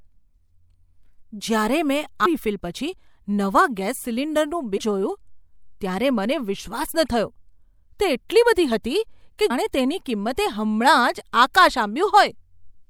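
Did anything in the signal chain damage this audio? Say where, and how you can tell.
Yes. Compressed frames skipped at the decoder: at 2.25, 4.77 and 9.49 s the speech leaps ahead one to two tenths of a second. Each jump fits whole 24 ms frames being lost.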